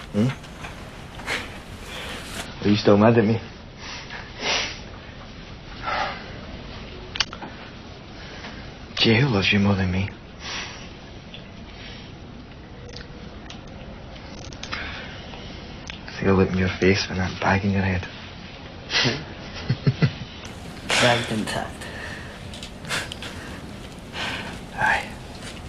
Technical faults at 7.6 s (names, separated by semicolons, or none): adaptive stream at a lower bitrate